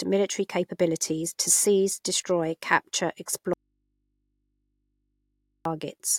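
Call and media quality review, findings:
Audio dropout to a faint residue, 3.53–5.65 s, right after "to seize destroy capture". Speech cuts abruptly for 2.1 s. Gap holds only mains hum, roughly 50 dB below speech. Likely upstream signal loss with an open, still-live input path.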